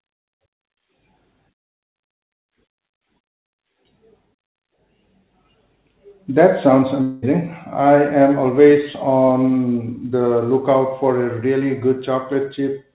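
From 7.02 to 7.24 s the sound gives way to a buzzy continuation of the preceding audio that fades without reaching silence, likely a long network dropout. About 0.2 s never arrived, far longer than a brief packet-loss glitch, and the audio resumes further on with that stretch missing.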